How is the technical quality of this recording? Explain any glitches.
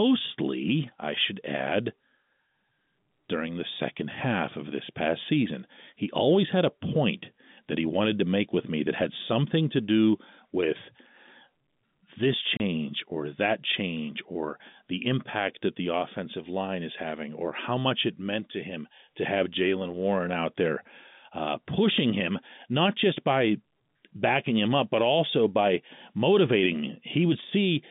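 The speech comes over a narrowband telephone line, with G.711 telephone coding limiting it to roughly 150 Hz to 3.6 kHz, and it has one audible glitch. Packet loss filled with silence occurs from 12.57 to 12.60 s, just before "or that change or". A 30 ms stretch of audio failed to arrive, which fits a single lost packet, and the receiver played digital silence in its place. The speech cuts out abruptly, leaving a brief hole with hard edges.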